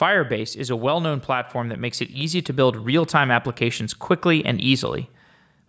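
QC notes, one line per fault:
0.66–2.98 s, automatic gain rising: the level swells by about 6 dB over roughly 2.3 seconds, voice and background together, settling just before "time applications quickly and". The gain control judged the input too quiet and ramped its gain up gradually. On the waveform the envelope widens steadily across this span. On a spectrogram the whole band brightens uniformly, including the noise floor, up to the call processing's 8 kHz ceiling.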